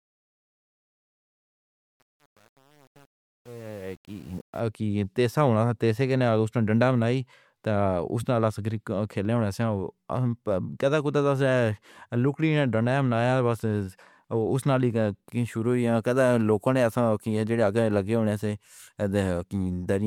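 From the opening to about 4.60 s, the speech fades in with truncation distortion on the fade. The gain stage appears to keep only about 8 bits with no dither, so the quietest part of the rise, up to about 4.42 s, collapses into coarse square steps and sounds gritty. Unlike steady hiss or gate chatter, the grit tracks the fade level and thins out as the level climbs.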